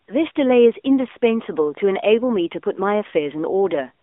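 From start to finish, the speech passes through the AMR narrowband mobile codec, the AMR-NB coder of 2G and 3G phone calls. The band is confined to a phone line, from 250 Hz to 3.6 kHz. Nothing above 3.8 kHz survives, so sibilants lose their edge. The codec rebuilds each sound from a vocal-tract model and a few pulses. At this rate the damage is plainly audible: a buzzy, synthetic tone, which fits a mid-rate mode near 10 kbps.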